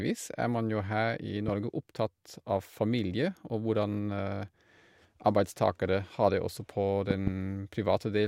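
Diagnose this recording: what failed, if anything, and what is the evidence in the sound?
Loud pops occur at 1.48 to 1.50 s and at 7.11 to 7.30 s, and the speech continues underneath both. The first is a single sharp pop roughly 10 dB above the signal. The second is a pair of pops in quick succession, about 15 dB above it. The stage is likely the analogue wiring, with a connector, switch or static discharge injecting a sudden voltage step that the following circuitry shapes into a brief thump.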